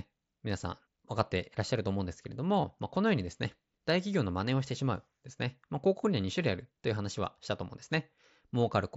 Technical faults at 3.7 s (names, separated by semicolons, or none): none